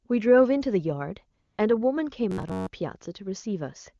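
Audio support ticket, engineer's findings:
AMR comfort noise, 1.41 to 1.57 s: real background drops out for 160 ms, replaced by smooth, steady synthetic hiss that switches in and out. The level stays up, unlike a dropout or gate, so it is the receiver filling a pause after speech frames stopped.

Robotic sound from repeated short buffers, 2.30 to 2.70 s: rigid metallic buzz at 93.8 Hz, roughly a 10.7 ms loop, covering most of this stretch. Likely cause: audio arriving late, with the last short buffer replayed. The fixed pitch and skipped audio distinguish it from codec roughness.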